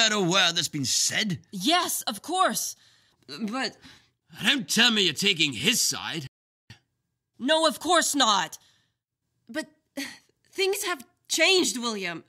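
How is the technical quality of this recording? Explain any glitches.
One glitch stands out. At 6.27 s the sound cuts to silence for about 0.43 s, resuming at 6.70 s: a playback stall, likely the player running short of data or its thread blocking.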